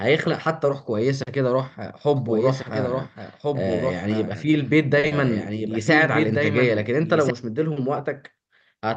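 From 2.16 s to 7.30 s a doubled audio track runs under the speech: a second full-band copy, about 5 dB quieter, trails roughly one and a half seconds behind. It most likely comes from the same signal being captured again through a slower path. Unlike an echo or reverb, it has no decay or room colour, and it starts and stops abruptly.

At 4.99 s to 5.06 s a short stall from a late packet occurs. A packet arrived 40 ms late, the jitter buffer ran dry, and the receiver stretched the last sound for 40 ms before resuming where it left off. Nothing is lost. The sound is only held too long, with a slight buzz or dip, which separates it from a dropout.

At 5.07 s to 5.14 s a short concealed packet loss follows. Here 40 ms of audio never arrived, and the decoder filled the gap by extending the preceding sound and blending back in. The result is a brief smear where real content is actually missing, rather than merely delayed. 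Through the Opus call path the top end stops near 12 kHz.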